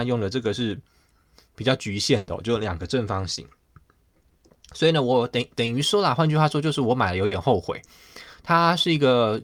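At 2.17 to 2.29 s there is a burst of packet loss. About 100 ms never arrived. The receiver stretched and faded the last sound, and the speech resumes with that stretch missing. At 3.35 to 3.39 s and 5.65 to 5.69 s, short concealed packet loss leaves brief smears. Each fills a 20 ms hole with continued sound before blending back. At 7.25 to 7.33 s, another burst of packet loss replaces 60 ms with a fading continuation.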